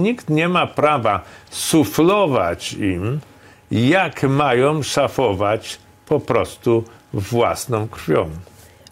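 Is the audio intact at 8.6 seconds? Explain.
Yes, at 8.6 seconds the audio is intact, with no dropout, click, distortion or other fault to be heard at that moment.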